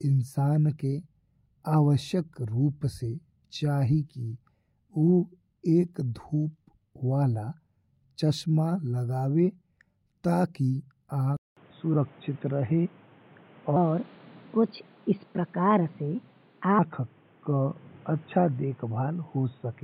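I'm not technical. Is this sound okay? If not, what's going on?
No. At 11.37 seconds the speech goes quiet for about a fifth of a second. Then it comes back dull and boxy and stays that way to the end. A faint new background noise appears, while the loudness stays about the same. This sounds like an input switched to a poorer device. The recording most likely jumped to another microphone or a headset partway through.

From 13.76 to 16.79 seconds there's a second problem. The speech runs 1.25 times too fast. Because speed and pitch move together, the voice also jumps up roughly four semitones, so it sounds hurried and squeaky. At 16.79 seconds it drops back to normal speed. This is a section at the wrong speed, likely from that stretch being played back against the wrong clock.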